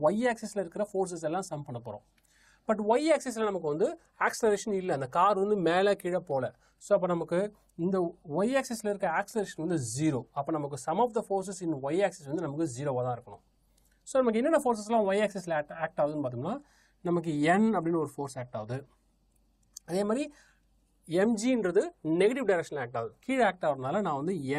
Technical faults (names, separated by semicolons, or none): none